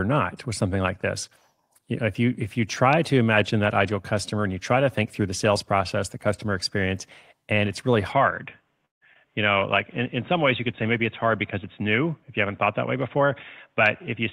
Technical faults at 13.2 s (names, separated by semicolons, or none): input switched to a poorer device; jitter buffer speed-up